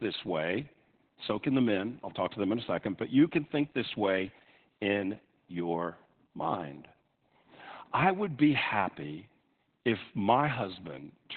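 From start to finish the speech carries heavy Opus voice compression in its narrowband SILK mode. The band stops at about 4.4 kHz, so consonants lose their edge and the voice sounds muffled, hoarse and faintly robotic, with the coarse, buzzy texture that fits a rate near 8 kbps. A spectrogram shows a flat ceiling with nothing above 4.4 kHz, and smeared, blocky harmonics coded in 20 ms frames.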